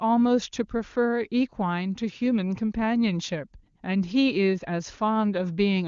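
No technical faults can be heard in this speech.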